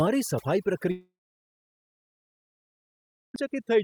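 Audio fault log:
throughout: overdone noise removal. The noise reduction was set too hard, so bands near its noise estimate are pulled to nothing, taking quiet speech detail along. Background sits near silence with twinkling specks. On a spectrogram: isolated flickering dots in a blank floor.
0.91–3.35 s: long network dropout, likely. About 2.4 s of audio never arrived; a brief fading continuation of the last sound gives way to roughly 2.2 s of silence before speech resumes with the gap missing. Waveform shows a flat line; spectrogram a blank block.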